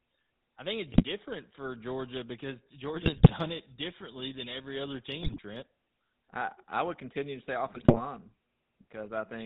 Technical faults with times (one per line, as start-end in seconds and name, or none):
0.00-9.46 GSM full-rate codec
0.92-1.04 GSM bit errors
3.00-3.31 GSM bit errors
5.22-5.39 GSM bit errors
7.66-8.01 GSM bit errors